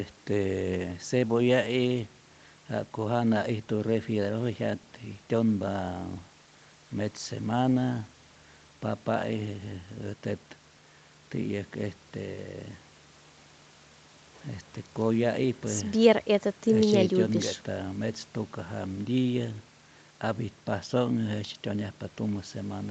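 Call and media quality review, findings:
No faults found; call microphone processing working normally.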